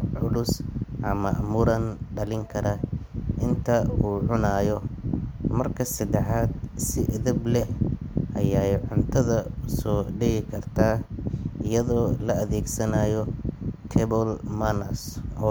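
Nothing stood out on listening to the speech recording as a technical fault at any point.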